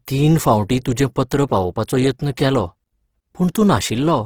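Throughout the speech, the sound is grainy and rough. Tones carry a noisy, hissy texture instead of clean detail. There is little of the swirling, watery quality heard from MP3. This points to likely Opus compression in its music mode. Short of bits, the encoder keeps each band's energy but fills the fine detail by folding lower bands or with noise. The damage is plainly audible and fits a rate near 16 kbps. The top still reaches about 20.4 kHz.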